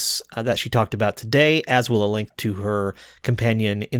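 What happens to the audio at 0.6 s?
Nothing goes wrong at 0.6 s: the speech there is intact, with only the light softening you would expect from the Opus voice compression carrying it.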